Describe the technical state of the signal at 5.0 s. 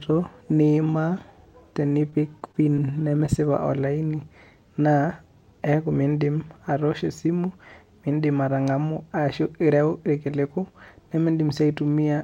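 At 5.0 s the speech signal is intact, with no audible fault at that moment.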